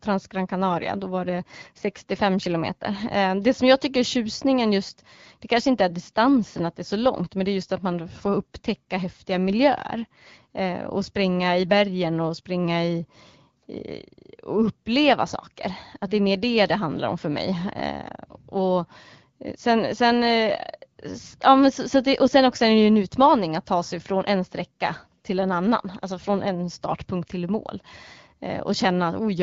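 No faults found; the speech is carried over the AMR wideband (HD Voice) codec at 12.65 kbit/s, whose light coding character is audible but nothing goes wrong.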